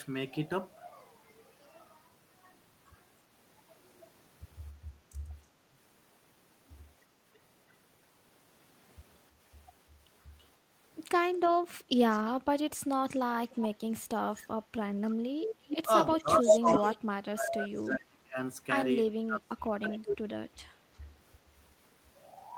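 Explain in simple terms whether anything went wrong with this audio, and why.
Echo leak: a delayed repeat of the speech comes back about a third of a second later. It appears at 7.35, 10.39, 12.11, 13.49, 15.42 and 20.06 seconds. It grows louder over time. The likely cause is a speakerphone whose echo canceller let some of its own output slip back.

Speech suppressed in double talk: the speech briefly dips at 5.29 to 5.33 seconds, then drops deeply for stretches between 13.92 and 20.09 seconds. This likely happened because both sides talked at once.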